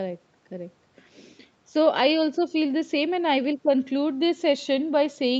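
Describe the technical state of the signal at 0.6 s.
At 0.6 s the speech is intact, with no fault at that moment; the only thing to hear there is the normal call-path band limit, with nothing above about 8 kHz.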